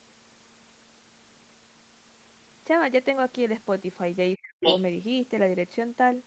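A short speech recording carried over a call shows two faults close together near its end. Throughout, nothing is heard above about 8 kHz, which fits a wideband call codec running at roughly 20 kbps. From 4.35 to 4.63 s the talker's speech is suppressed in double talk. It drops very deeply, by around 40 dB, for about a third of a second. The likely cause is an echo canceller that could not tell the near talker from loudspeaker echo while both sides spoke, and so turned everything down. This differs from a network dropout because the level falls away instead of breaking into clicks or repeated fragments, and it lines up with the other party's sound playing at the same time. From 4.61 to 4.83 s, the other side's voice leaks through. A second talker appears at about the same loudness as the main one, likely because the echo canceller did not remove the loudspeaker signal from the microphone. 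It can be told apart from crosstalk or a second person in the room by its timing, as it starts just as the suppression releases.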